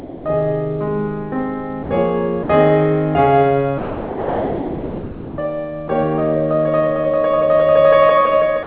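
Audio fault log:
0.00–0.25 s, 1.83–1.89 s, 2.43–2.49 s, 3.78–5.38 s, 5.88 s, 8.63–8.66 s: sound dropped by the voice detector. The music gives way to steady, featureless comfort noise, likely because the sender's detector took quiet passages for background. This is unlike packet-loss concealment, which would smear or repeat the preceding sound rather than replace it with flat hiss.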